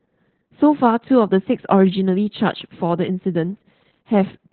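Opus voice compression in narrowband SILK mode runs throughout, consistent with about 8 kbps, leaving nothing above 4.3 kHz, so the speech sounds muffled, hoarse and faintly robotic.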